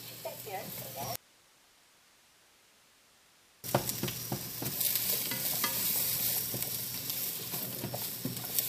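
A likely break in the signal path, with the line left live, causes an audio dropout to a faint residue in this recording of sounds: from 1.16 to 3.64 s, about 2.48 s, the sound cuts out abruptly, leaving only hiss roughly 50 dB below normal.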